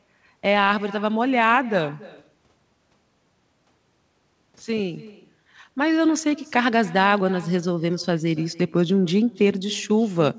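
Speech, carried over a call path with nothing above 8 kHz, which points to a wideband codec such as G.722. Throughout, there is echo with no canceller. Every phrase returns about a third of a second later. The copy sits about 20 dB down, and thinner. A far-end loudspeaker is feeding its microphone, and nothing removes it.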